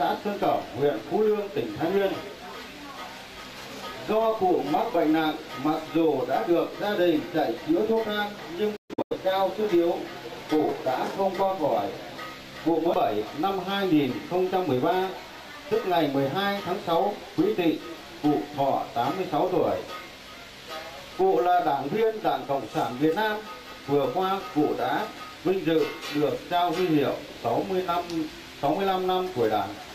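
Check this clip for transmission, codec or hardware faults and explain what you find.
One fault is present. Between 8.76 and 9.17 s, a digital broadcast dropout occurs. The receiver muted failed frames, leaving short silent holes with 8 ms fades, about 256 ms lost, the longest 128 ms.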